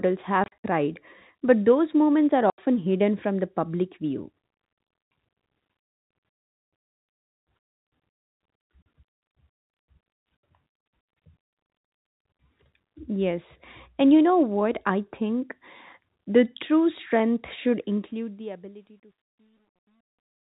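Packet loss filled with silence punches holes at 0.44 to 0.64 s, 2.5 to 2.58 s (between "but those moments are" and "hidden from the public"), and 8.82 to 8.86 s. The gaps fit 20 ms packets. From 17.79 s, just after "strength should", the fade-out shows truncation distortion: the audio is held to about 11 bits without dither, so it turns gritty, worst from 18.74 s to the end.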